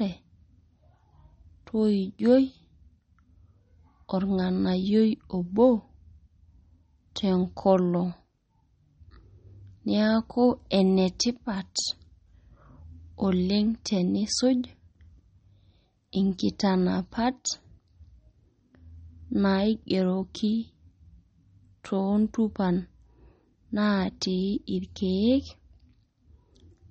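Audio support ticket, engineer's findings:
Likely MP3 compression at low bitrate, fits about 32 kbps: treble cut off, nothing above 8.4 kHz; weak lines dropping in and out give watery, swirly speech, throughout.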